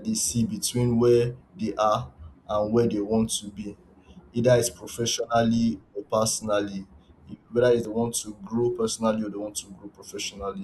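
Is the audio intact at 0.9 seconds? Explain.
Yes, at 0.9 seconds the speech plays through cleanly, with no dropout, click, distortion or other fault at that moment.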